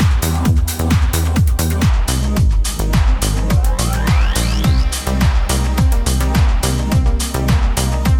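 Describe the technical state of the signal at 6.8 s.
At 6.8 s the audio sits inside a section at the wrong speed, running from 1.89 s to the end. It plays at 0.8 times its original speed. Pitch drops by roughly four semitones with it. Everything sounds deeper and slower, likely from playback against the wrong clock.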